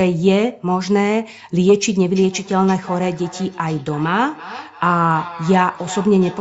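From 2.16 s to the end, there's feedback echo between two devices: a second device replays the speech into this microphone, so each word returns about every third of a second, thinner and ringing, peaking around 16 dB below the speech.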